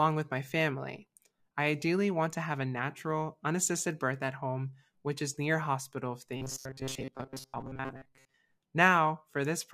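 From 6.37 to 8.34 s, just after "is near hospital if", the sound turns into a rigid, metallic buzz at about 133 Hz that only loosely tracks the speech. This is robotic sound from repeated short buffers, likely caused by audio arriving too seldom, so a roughly 7.5 ms slice was replayed over and over for most of the stretch.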